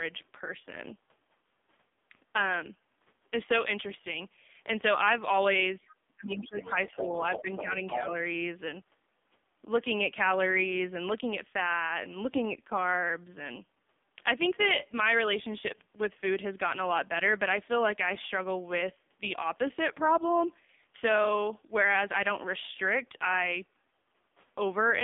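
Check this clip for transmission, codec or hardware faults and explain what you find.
Three faults are present: narrowband mobile coding across the whole clip, plus speech suppression and leaked far-end voice between 5.81 and 8.05 s.

AMR narrowband mobile codec, throughout: the speech is buzzy and synthetic, band-limited to about 200 Hz to 3.6 kHz with nothing above 3.7 kHz. This fits a low AMR-NB mode near 5.9 kbps.

Speech suppressed in double talk, 5.81 to 7.22 s and 7.42 to 7.78 s: the voice dips, by roughly 25 dB at worst in the first stretch and about 5 dB in the second. This is likely the echo canceller attenuating everything while both sides talked.

Other side's voice leaking through, 5.88 to 5.96 s, 6.42 to 7.64 s and 7.88 to 8.05 s: a second voice appears. It is very faint in the first burst, about 10 dB below the talker in the second, and about 5 dB below in the third. The likely cause is loudspeaker echo that the canceller failed to remove.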